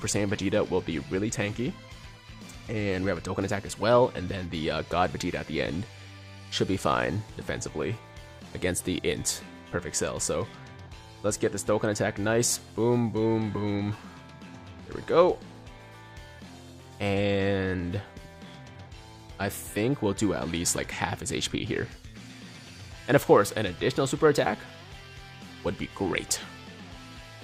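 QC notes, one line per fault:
No fault found, so there are no fault lines to give.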